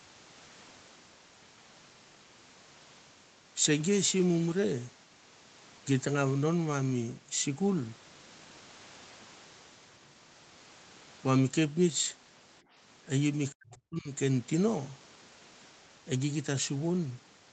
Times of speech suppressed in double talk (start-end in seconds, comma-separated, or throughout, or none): 13.52-14.09